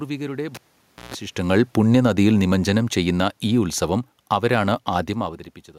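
Automatic gain falling runs from 1.36 s to 5.43 s. The gain control judged the input too loud, or its background noise too strong, and eased its gain down steadily, by about 9 dB over those four seconds. The voice and the room noise beneath it sink together, which separates this from the talker shifting position near 1 s and again near 5 s. A change in distance alters the voice alone, while here the whole level slides gradually.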